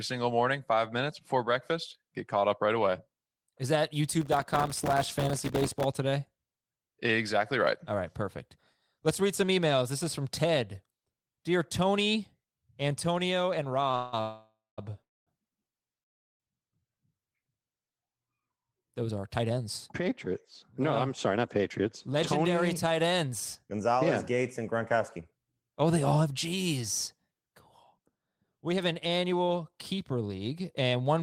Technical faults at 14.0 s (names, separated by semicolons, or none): short stall from a late packet; call audio freeze